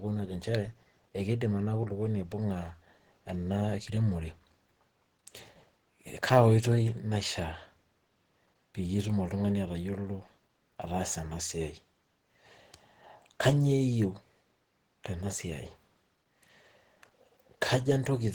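From start to finish the speech sounds hoarse and somewhat muffled, with a rough, grainy coating on sustained sounds and noisy fill where finer detail should be. The damage is plainly audible. This is likely Opus compression running in its hybrid speech mode, which fits a rate around 16 kbps. Bits are spread thin, so bands are approximated rather than coded exactly. Bandwidth stays wide, with content reaching about 20.1 kHz.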